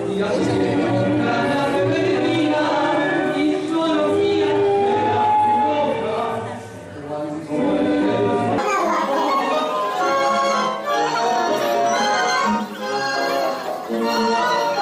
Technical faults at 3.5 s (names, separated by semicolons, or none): none